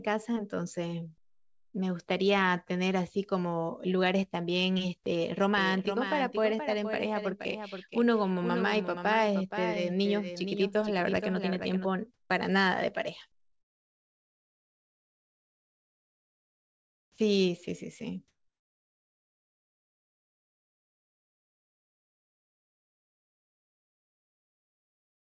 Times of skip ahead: none

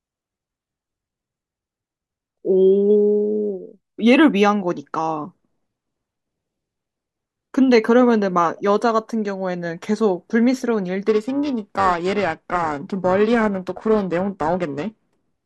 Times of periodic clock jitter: 11.08-15.45

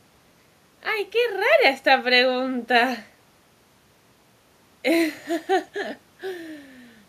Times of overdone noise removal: none

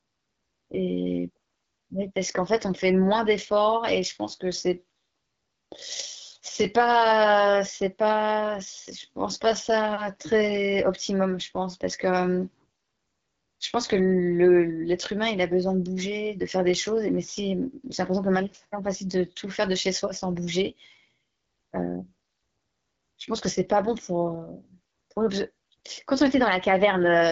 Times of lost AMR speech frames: none

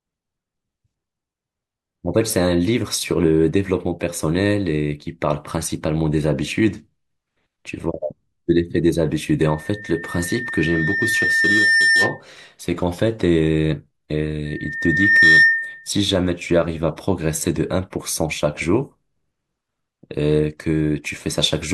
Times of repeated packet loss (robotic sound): none

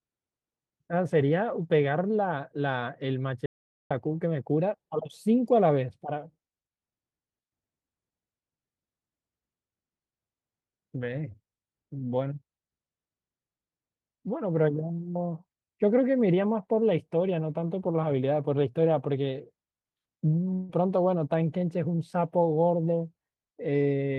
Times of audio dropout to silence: 3.46-3.91

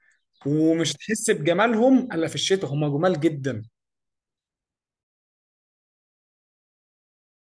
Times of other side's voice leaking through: none

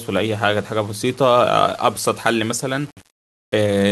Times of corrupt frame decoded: none

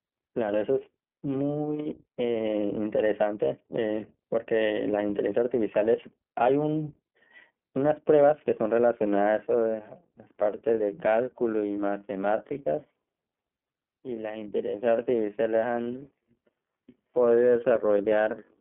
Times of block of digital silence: none

